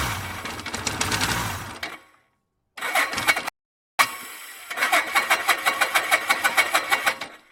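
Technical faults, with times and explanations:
3.49 to 3.99 s, rebuffering stall: the playback just drops to silence for about half a second, then carries on from exactly where it left off. The player ran dry of downloaded audio and waited for more, so nothing's missing, but 0.51 s of dead air gets added.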